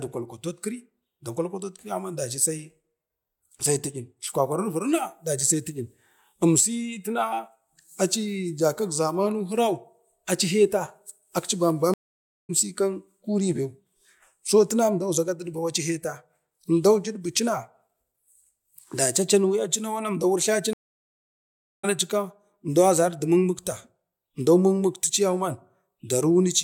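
Stream reconnects at 11.94 to 12.51 s and 20.73 to 21.85 s: the connection dropped, playback fell silent for 0.55 s and then 1.10 s, and a fresh decoder picked the speech up again further along, skipping roughly a third of a second and then about a second, with a muted or faded first frame.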